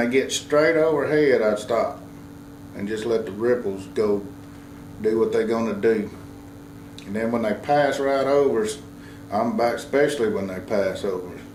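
A DECT cordless phone buzz runs through the whole clip: a nearby handset or base bursts every 10 ms, rectified into a thin 100 Hz buzz, quietly about 35 dB under the sound. A spectrogram shows evenly spaced horizontal lines at 100 Hz multiples; the waveform shows periodic spikes.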